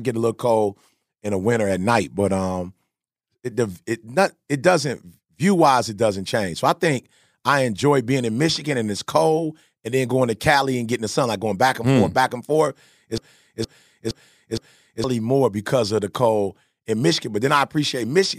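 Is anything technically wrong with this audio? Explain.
Yes. From 13.18 to 15.04 s, after "hmm back and forth", a broken-record loop repeats one 0.47 s fragment four times. A stalled stream likely kept replaying it, losing the audio beneath.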